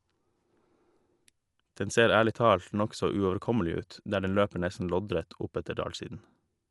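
From start to finish the speech is band-limited, with nothing above about 11.4 kHz, and carries a rough, fluttering noise clinging to the voiced tones. That pairing most likely points to Dolby Digital compression at a low rate, consistent with about 64 kbps. Starved of bits, the encoder cut the top band and left many frequency lines empty for the decoder to fill with dither noise. Unlike a simple low-pass filter, the dullness comes with that grainy, noisy fill rather than a clean roll-off.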